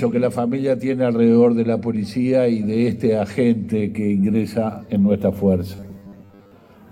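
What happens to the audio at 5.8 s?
From 5.76 to 6.52 s, new audio likely arrived too seldom, so playback filled most of the gap by looping a roughly 10 ms stretch while the real audio was skipped. This robotic sound from repeated short buffers imposes a rigid, metallic 100 Hz buzz.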